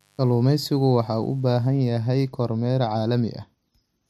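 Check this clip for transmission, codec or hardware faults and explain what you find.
A mains buzz sits under the speech from the start to about 1.68 s, then stops. Switching spikes leaking in twice per 50 Hz cycle, through a dimmer, rectifier or poor shielding, put a dense comb of 50 Hz harmonics into the signal that reaches into the kilohertz range. It sounds like a steady, raspy buzz, faint and well below the speech. A spectrogram shows evenly spaced horizontal lines 50 Hz apart ending abruptly at 1.68 s. The waveform shows small, regular spikes 10 ms apart in the gaps.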